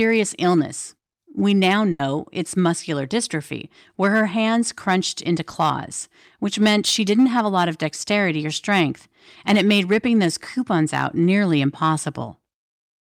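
Throughout the clip, a stage in the chain was driven about 6 dB past what it could pass, so hard clipping shaves the speech peaks flat on around one percent of samples. Those squared-off tops add high harmonics, heard as brief crackle whenever the voice peaks.

From 1.91 to 2.01 s, just before "it's muscular dystrophy where", a burst of packet loss left the decoder without audio. It stretched the last sound for about 80 ms while fading it, giving a held buzz or dying hiss, then jumped ahead with roughly 80 ms missing.

From 5.51 to 5.55 s, right after "her hands crunched into", short concealed packet loss occurs. The receiver covered about 20 ms by extending the preceding sound and blending back into the real audio. The result is a brief smear or wobble, with a short stretch of sound gone.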